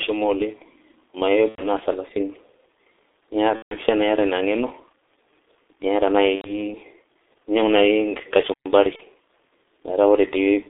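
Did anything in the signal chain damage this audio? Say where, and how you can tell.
Yes. At the codec stage, the whole clip went through G.723.1 at about 6.3 kbit/s, confined to roughly 200 Hz to 3.6 kHz. Its slow-updating voice model and coarse frames leave the speech heavily muffled and hoarse, with smeared consonants throughout.

On the network side, VoIP packet loss concealed by the speech codec appears at 1.49–1.65 s, 3.56–3.77 s, 6.36–6.60 s and 8.96–9.01 s. The decoder extended its last pitch and filter with falling gain, giving buzzy, fading stretches. The 90 ms and 150 ms gaps fit three and five lost 30 ms frames.

At playback, a stall silences the output for about 120 ms at 8.54–8.66 s, cutting the speech off mid-flow before it resumes. This is likely the player running short of data or its thread being blocked.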